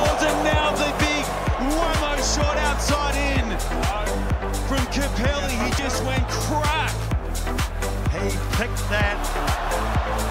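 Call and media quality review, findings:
No audible faults found.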